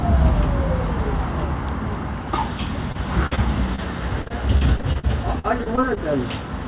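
Around 2.92 s there's a short concealed packet loss. About 20 ms never arrived in time, so the receiver stretched the preceding sound over the hole and blended back. It comes across as a quick smear. The same thing recurs at 3.35 s and 3.76 s, each a brief smear or wobble.

Between those, from 3.26 to 3.33 s, there's a burst of packet loss. Roughly 40 ms went missing in one go. The decoder kept extending the last sound while pulling it down in level, so you hear a held, fading tail before the audio picks up again with that slice gone.

From 4.22 to 5.98 s the repeated packet loss gives it a robotic sound. Twelve separate gaps, the longest 47 ms, are each patched by continuing the previous sound, adding up to about 17% of that stretch. The result is choppy and full of holes.

Underneath it all, the call path itself has nothing above 4 kHz, which points to a narrowband telephone codec such as G.711.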